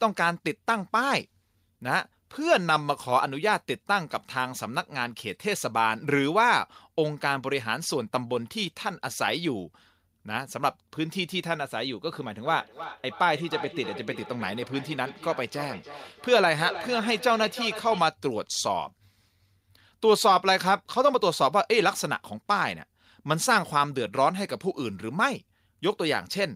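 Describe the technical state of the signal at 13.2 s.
At 13.2 s the speech is caught in a feedback echo between two devices, running from 12.45 to 18.13 s. A second device replays this audio and the first device's microphone re-captures it, which the first device's echo canceller cannot remove. Each word returns roughly every third of a second, thinner and ringing, peaking about 13 dB below the speech.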